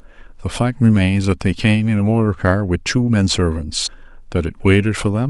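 At 3.86 to 3.88 s the speech jumps forward: compressed frames skipped, about a tenth of a second of audio simply never plays. The decoder lost or rejected a short run of frames, and the gap of about 100 ms fits a handful of frames of roughly 23 ms each. Unlike a dropout there is no silence; the speech simply carries on from a later point.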